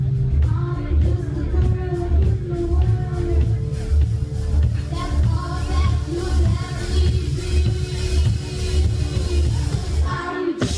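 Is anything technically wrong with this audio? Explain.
No, nothing technically wrong can be heard here.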